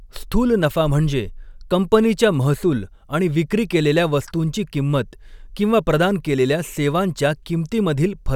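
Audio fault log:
No fault is heard in this speech recording. Nothing in it calls for an entry in this log.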